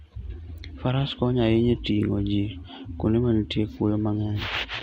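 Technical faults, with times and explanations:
1.19–1.44 s, DAB burbling: For about a quarter of a second short blips of noise sit over the speech. Weak reception lets bit errors, at a rate of a small fraction of a percent, slip past the error correction into the MP2 audio data. Corrupted samples put short blips of noise in single sub-bands, and corrupted scale factors make individual sub-bands jump in level for up to a frame, which fits around a dozen damaged frames.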